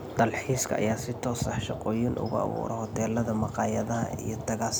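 Nothing in this speech recording points to a technical fault. There are no events to place on a timeline and nothing to trace to a cause.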